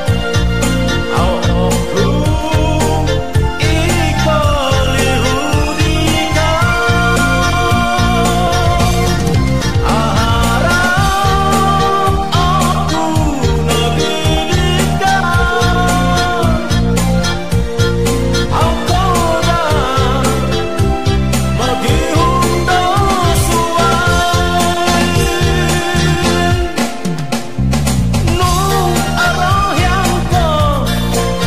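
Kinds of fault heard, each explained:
Loose connector crackle: a worn or dirty contact intermittently making and breaking, chopping the signal into irregular scratchy bursts with pops from any DC on the line. Here it appears twice, briefly, at 2.41 to 2.55 s and 27.15 to 27.21 s.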